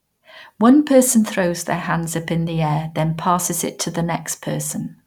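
No technical faults can be heard in the sound at any point.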